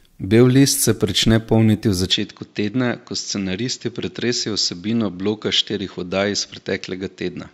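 At 2.12 s the speech abruptly loses its top end and stays that way to the end of the clip, with nothing above 7.6 kHz. The change is immediate, with no gap. The level also drops by a few decibels, and a faint new background noise appears, roughly 40 dB below the speech. This combination likely comes from the input being switched to a poorer device, one with narrower bandwidth, its own gain and its own noise floor.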